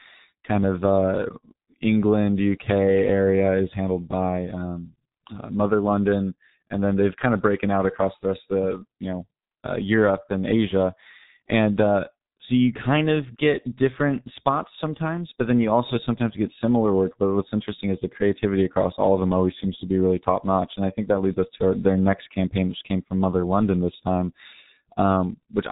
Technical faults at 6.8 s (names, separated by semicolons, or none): G.723.1 codec